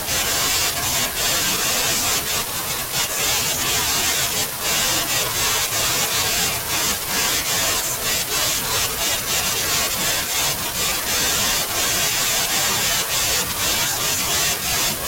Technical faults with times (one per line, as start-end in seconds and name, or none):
2.71 overlapping chunks
8.72 overlapping chunks
14.72 overlapping chunks